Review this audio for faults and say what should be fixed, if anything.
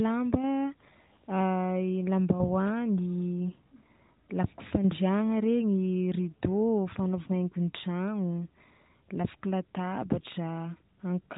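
Nothing here needs fixing, so you can leave this speech recording as it is.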